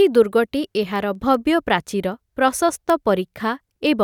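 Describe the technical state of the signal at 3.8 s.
At 3.8 s the speech is still carrying word clock ticks, which run from 0.18 s to 3.87 s. The receiving device is clocked independently of the digital source, so roughly every fifth of a second the two clocks slip by one sample, giving around twenty sharp ticks of uneven strength. That spacing points to a clock mismatch of roughly 100 ppm. The steady, metronome-like rhythm is what separates these ticks from random clicks or dropouts.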